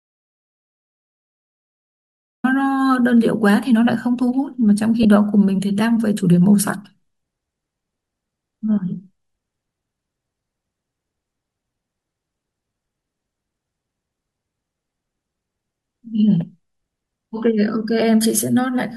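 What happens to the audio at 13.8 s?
Nothing goes wrong at 13.8 s, and the speech carries on intact through that moment.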